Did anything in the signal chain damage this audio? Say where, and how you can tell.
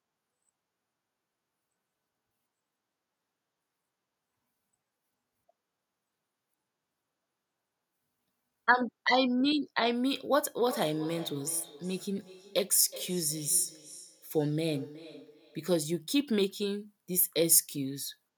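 Yes. From 10.6 s to 15.8 s there is feedback echo between two devices, a call-processing fault. The speech returns at a steady interval of roughly 400 ms, peaking at about 17 dB below the direct speech, with a thinner, ringing quality. A second device in the same room is on the call and plays the audio out. This microphone picks it up again, and its own echo canceller doesn't remove it.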